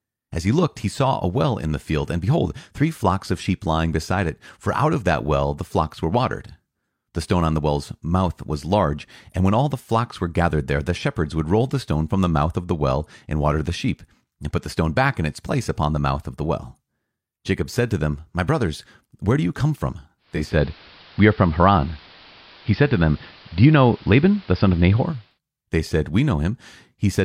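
From 20.18 to 25.39 s the receiver lost the digital signal and blended over 462 ms to the station's AM broadcast, which is digital radio blending to analogue. The speech loses treble, shifts about 4 dB in level and picks up faint hiss, then blends back.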